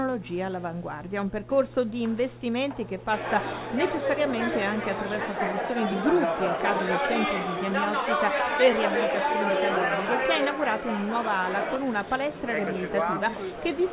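The audio carries mains hum from the start to 5.24 s. It is a steady low tone at 60 Hz, sitting roughly 20 dB below the signal. It then stops. A ground loop or a nearby transformer leaking the power line into the signal is the cause. The sound has also passed through a call link, and nothing is heard above 4 kHz, which fits a narrowband G.711 A-law codec.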